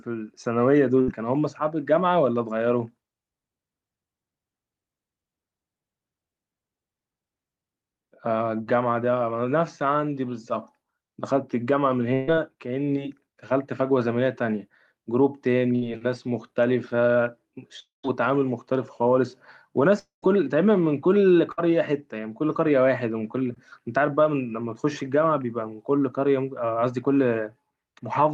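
At 1.01 to 1.10 s the speech breaks with a burst of packet loss: about 60 ms of audio never arrived, and the receiver stretched the last sound into a brief buzz or hiss that fades before the speech picks up further on. The same happens at 12.14 to 12.29 s, where about 140 ms is lost and the fill runs the whole gap without falling silent, and at 15.75 to 15.84 s, again about 60 ms. At 21.52 to 21.72 s about 60 ms is missing and the fill is shorter. On a spectrogram each appears as a smeared, frozen band of the previous harmonics or noise, thinning out, then an abrupt change where the speech resumes. The waveform shows a decaying, repetitive envelope.

At 17.80 to 18.05 s and 19.99 to 20.24 s about 240 ms drops out each time, most likely from a long network dropout. A fading buzz or hiss carries over from the last sound, then about 150 ms and 140 ms of near silence follow before the speech returns mid-stream. 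A spectrogram shows a fading smear ending in an empty, dark gap, and the waveform a flat line between the fill and the return.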